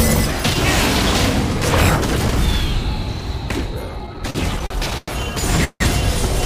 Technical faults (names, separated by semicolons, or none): repeated stalls (stutter); call audio freeze